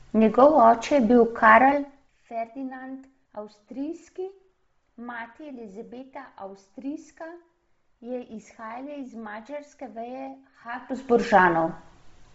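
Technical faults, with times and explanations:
Throughout: Bluetooth LC3 compression, likely the cause of the grainy, noise-filled highs and the lack of anything above 7.7 kHz.
1.57 to 2.31 s: zipper noise. The level drops by about 20 dB in 1 dB steps, roughly 30 a second, and each step ticks, unlike a smooth fade.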